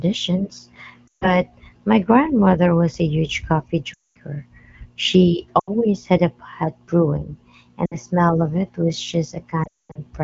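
At 1.07, 3.94, 5.60, 7.85 and 9.63 s, lost AMR speech frames interrupt the speech for 140, 220, 80, 60 and 280 ms. Each time the decoder repeats its last good pitch and vocal-tract settings at falling gain, so the speech drops to near silence within two frames, as wideband concealment does, before returning weak or rough. The last loss is scattered across 320 ms. Unlike a hard dropout or clipped gap, nothing cuts off abruptly.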